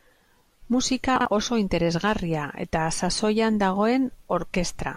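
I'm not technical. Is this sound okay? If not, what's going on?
No. At about 1.16 to 1.25 seconds the speech briefly jumbles: two short pieces of sound, each about 46 ms long, play in swapped order. This fault is called chunks out of order. Nothing is missing, but the wrong sequence leaves hard joins where the pieces meet.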